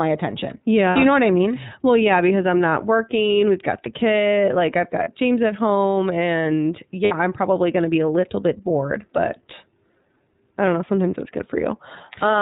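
Throughout, the speech carries plainly audible iLBC codec damage. Nothing above 4 kHz survives. The sound is rough and synthetic, which fits 30 ms frames at 13.33 kbps.

Lost iLBC frames occur at 0.90 to 0.97 s, 5.04 to 5.08 s and 7.04 to 7.15 s. Each gap becomes a brief buzzy held vowel, then clears at once.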